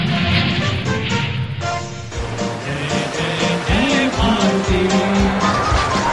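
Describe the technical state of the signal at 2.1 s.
At 2.1 s, as throughout, the resampler is restarted on every block: each 20 ms block is converted from 48 kHz to 24 kHz separately, leaving 50 Hz ticks, seen as evenly spaced vertical spectrogram lines and waveform steps.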